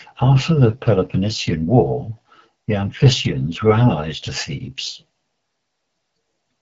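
Rough, raspy speech with nothing above 7.3 kHz runs throughout, the sound of the AMR wideband (HD Voice) codec at a low rate, probably 8.85 kbit/s.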